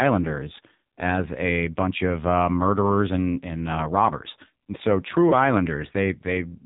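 The speech passed through an AMR narrowband mobile codec at a very low rate, consistent with roughly 5.9 kbps, leaving nothing above 3.8 kHz and a buzzy, synthetic voice throughout.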